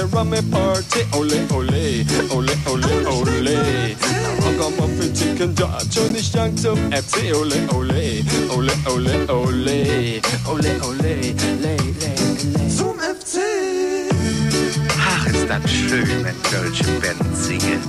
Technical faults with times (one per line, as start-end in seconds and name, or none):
6.09-6.12 corrupt frame decoded